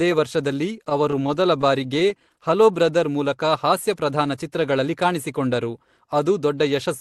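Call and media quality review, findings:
Repeated stalls (stutter), 0.89–2.36 s: 17 short holds, longest about 21 ms, roughly an eighth of that span concealed. Jitter buffer underrunning on late packets, last sound extended each time. Unlike packet loss, nothing is dropped; audio drags rather than skips.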